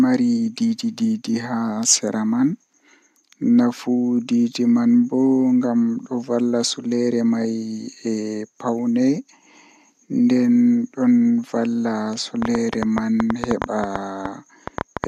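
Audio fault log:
12.42–15.05 s, train of clicks: a burst of sharp ticking and popping runs over the speech to the end, around twenty near-identical clicks arriving unevenly at about 7.3 per second and standing out well above the speech, roughly 15 dB louder at their peaks. Because each pulse is added on top of the signal, the clicks carry on through the pauses as well. The likely source is interference from nearby equipment or a faulty connection or power supply injecting repeated short spikes.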